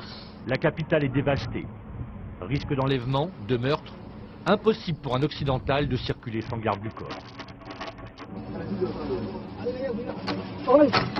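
Twice the audio falls into a Bluetooth SBC bit pool drop, from 0.45 to 2.89 s and from 6.33 to 8.37 s. The treble goes dull and gritty noise rises. This points to the bit pool falling from about 31 to 6, near 55 kbps, on a congested link.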